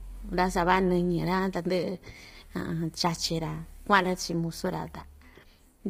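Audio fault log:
Throughout: low-delay AAC compression, heavy; short frames blur speech harmonics, leaving rough, grainy tone with noise between them, likely AAC-ELD near 24 kbps, nothing above 15.6 kHz.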